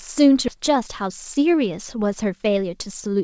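At 0.48 to 0.50 s the speech lurches forward with no gap, as though a piece were cut out and the two sides butted together. This skip ahead drops roughly 0.7 s of audio, discarded while later audio was already queued.

From 0.58 s to 3.21 s the speech runs about 6% fast, sounding slightly hurried at unchanged pitch. This jitter buffer speed-up trims tiny pitch-period slices repeatedly, around 150 ms in total, to shed excess buffered delay. Throughout, the G.722 call path leaves nothing above 8 kHz.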